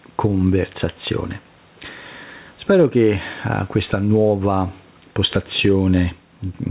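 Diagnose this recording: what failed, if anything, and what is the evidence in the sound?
Gain pumping throughout: the gain swings about 10 dB as loud syllables pull it down, likely excess mic gain hitting the call processing's fast limiter.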